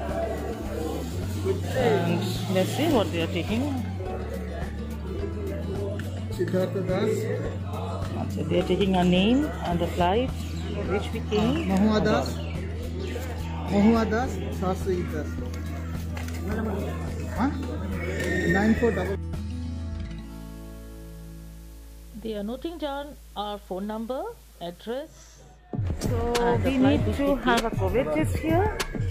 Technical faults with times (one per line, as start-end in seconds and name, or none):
20.13-25.20 digital radio blending to analogue